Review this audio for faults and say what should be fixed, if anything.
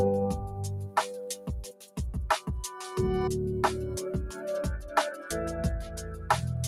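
A noise suppressor applied to music or sounds is active throughout. It treats sustained, steady content as noise, so the level swings by around 5 dB as held material and tails sink while attacks pass. Unlike compressor pumping, the dips follow how steady the sound is, not how loud.

Between 1.36 and 1.99 s, the noise suppressor cut the sound, pulling it down by up to about 12 dB over roughly half a second. The cut fell on steady or decaying material rather than on transients. A plain dropout would silence everything; here sudden onsets still come through.

To prevent both, bypass the speech-oriented noise suppressor for anything that isn't speech, or switch it to a music mode.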